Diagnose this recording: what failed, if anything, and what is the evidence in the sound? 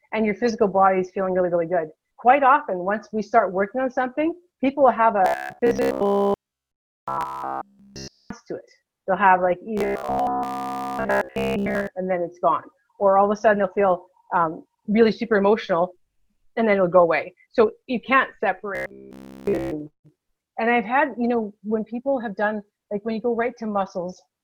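The driver or buffer stage is the likely culprit: new audio stopped arriving on time, so the software kept replaying a short stretch of the previous audio in place of the missing material. The result is robotic sound from repeated short buffers at 5.25–8.30 s, 9.78–11.87 s and 18.75–19.71 s, where essentially all the sound is replaced by repeats. A rigid, metallic 66.8 Hz buzz runs through each episode, which fits a repeated segment about 15 ms long.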